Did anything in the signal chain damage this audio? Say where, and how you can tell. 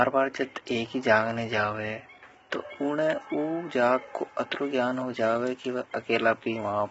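Yes, at the codec stage, all the way through: the speech sounds rough and grainy, with noise filling in between the harmonics and nothing above about 7.7 kHz. That's likely low-delay AAC compression, AAC-ELD, whose short frames smear pitch detail at a starved rate, somewhere around 16 kbps.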